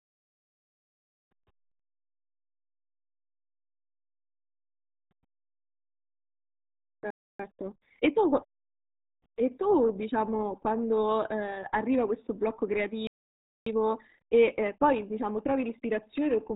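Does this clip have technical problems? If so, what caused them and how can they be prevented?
Yes. The whole clip has passed through the RealAudio 14.4 codec, an old dial-up speech coder. Its bitrate is so low that it keeps only a crude model of each stretch of speech, and the result fits RealAudio 1 at around 8 kbit/s. Nothing above about 4 kHz survives, so the speech is muffled and dull, with a heavy gargling, watery texture throughout. To prevent this, encode from the original source with a modern wideband codec at an adequate bitrate.

There are two playback stalls. The player most likely ran dry of buffered data or had its output thread held up, and it had nothing to send to the output. The sound cuts out mid-flow from 7.10 to 7.39 s (about 290 ms) and again from 13.07 to 13.66 s (about 590 ms), then resumes. A larger playback buffer and a playback thread that other work cannot block would prevent these gaps.

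Each stall is followed by time-compressed catch-up. To work off the backlog, the player drops small slices of audio and cross-fades across the joins. The speech then runs at 1.25 times normal speed without any change in pitch, from 7.39 to 8.55 s and from 13.66 to 16.02 s. It sounds rushed. Avoiding the stalls removes the need for catch-up, and a gentler speed-up limit would make any recovery less obvious.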